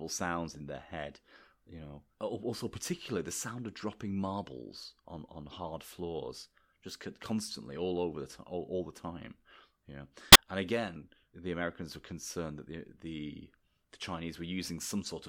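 At 5.49 to 5.51 s, a corrupt frame is decoded in the speech. It spans about one frame. The decoder plays damaged bits as if valid. Misread gains put energy at the wrong frequencies. The result is a faint, brief blip. A longer corrupt frame decode follows at 10.23 to 10.36 s. Its length points to about five damaged frames in a row. This error is far louder, a harsh burst of noise.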